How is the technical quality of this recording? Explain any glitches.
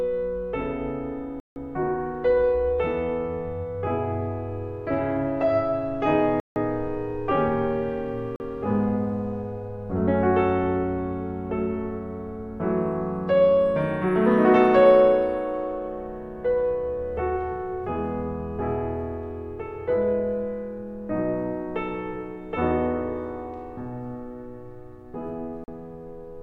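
The music drops out four times into blocks of digital silence: 1.40 to 1.56 s and 6.40 to 6.56 s (each 160 ms), then 8.36 to 8.40 s and 25.64 to 25.68 s (each 40 ms). The output buffer likely wasn't filled in time, so zeros went out instead. The cut and return are abrupt, with no fade. The longer gaps are audible holes, the shorter ones brief holes. Unlike a fade or concealed dropout, nothing smooths or masks these gaps.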